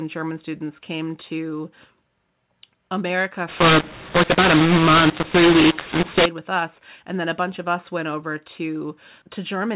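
From 3.48 s to 6.26 s the speech turns harsh and gritty. This is a mu-law and A-law mix-up: telephone audio encoded with the mu-law curve is decoded as A-law, so each 8-bit code maps to the wrong level. Some samples come out too loud, others too soft, and near-silent ones jump well above zero, filling pauses with hiss. The waveform looks jagged, with a raised floor in the gaps. The spectrogram shows broadband smearing under the 4 kHz ceiling of the otherwise normal G.711 path.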